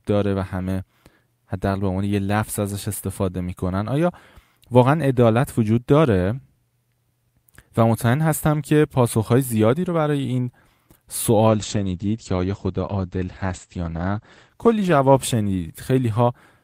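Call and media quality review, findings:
Call bitrate drop, 11.48 s to end: speech turns watery and rough, top end collapses to about 8 kHz from roughly 20 kHz. Encoder side, consistent with 64 falling to about 14 kbps. Continuous coarsening without gaps or clicks, unlike packet loss.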